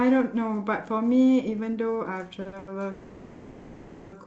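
Packets arrive late three times in quick succession, each a short stall from a late packet: the jitter buffer runs dry and the receiver stretches the last sound, at 2.41–2.47 s by 40 ms, at 2.47–2.54 s by 50 ms, and at 2.58–2.69 s by 90 ms. Each leaves a held, faintly buzzing smear, with nothing lost.

From 2.91 to 4.14 s comes a call audio freeze, likely caused by packets held up in transit emptying the jitter buffer. The last sound is extended as a fading buzz for 1.21 s without dropping to silence, then the speech resumes where it stopped.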